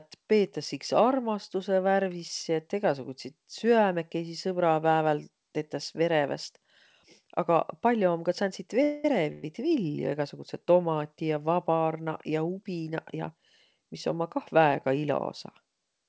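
At 8.83 to 9.05 s and again at 9.32 to 9.44 s, the speech stalls into a fading buzz or hiss, a call audio freeze likely caused by delayed packets emptying the jitter buffer. On a spectrogram each looks like a smeared, decaying continuation, and speech then resumes with nothing lost. From 13.14 to 13.88 s a jitter buffer speed-up plays the speech about 10% faster at the same pitch, cutting around 70 ms. The waveform shows whole pitch periods cut out, with no spectral gap, and the codec's cutoff at 8 kHz stays visible throughout.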